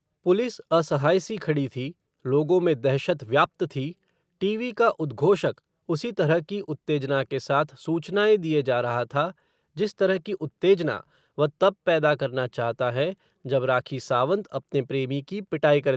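Nothing stood out on listening to this speech, which carries no content above about 8 kHz, as expected from a call path.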